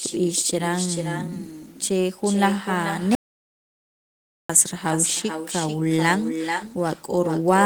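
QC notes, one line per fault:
Throughout: echo with no canceller. Every phrase gets a second, quieter pass roughly 0.4 s later, sitting about 8 dB under the direct sound and coming across thinner. That's the far end playing the call on a loudspeaker, its microphone catching it, and nothing stripping it out, so the speech returns after the network round trip.
3.15 to 4.49 s: audio dropout to silence. The speech cuts off mid-flow and the signal goes to silence for about 1.34 s before picking up again just as abruptly. There's no room tone or noise floor in the gap, which is why it sounds like a hole rather than a pause. The likely cause is the input being lost for a moment, through a disconnect, a failed link or a stray mute, while recording carried on.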